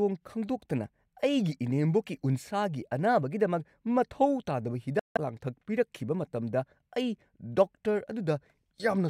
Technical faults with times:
4.99-5.17 Bluetooth dropout

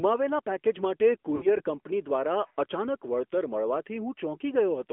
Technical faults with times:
0.00-4.92 AMR narrowband mobile codec
1.36-1.61 lost AMR speech frames

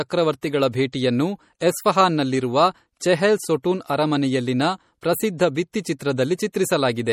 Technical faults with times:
0.00-7.12 MP3 compression

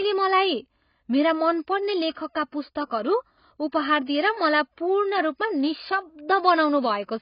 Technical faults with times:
0.00-7.21 AAC compression
4.06 pre-echo

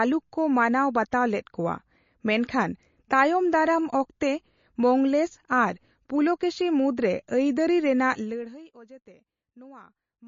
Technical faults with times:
0.00-10.28 MP3 compression

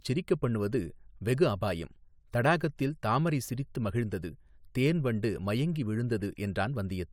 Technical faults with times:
none

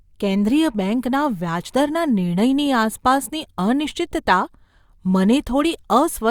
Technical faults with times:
none

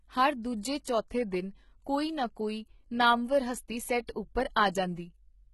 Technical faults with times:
0.00-5.53 HE-AAC compression

